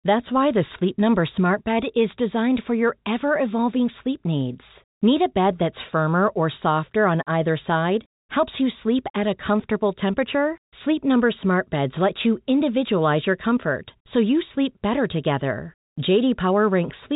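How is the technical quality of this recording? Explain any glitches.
Nothing stood out on listening; the speech arrives through an ordinary telephone channel, with the top end stopping at around 3.8 kHz, and there is nothing further to explain.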